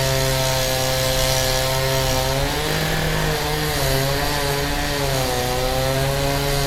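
No technical faults can be heard anywhere in the audio; the signal stays intact and continuous throughout.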